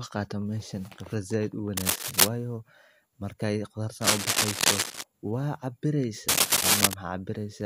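Scratchy bursts cut across the speech at 1.77 to 2.28 s, 4.01 to 5.04 s and 6.28 to 6.94 s. This is cable scratch noise. A worn cable or connector likely shifted, changing contact resistance. The rustling sits about 5 dB above the speech, then about 10 dB in the last burst.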